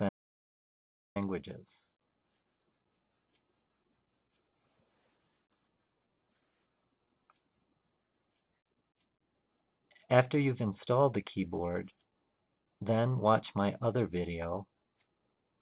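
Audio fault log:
0.09–1.16 s, audio dropout to silence: about 1.07 s of silence with no room tone, likely from a lost input while recording continued.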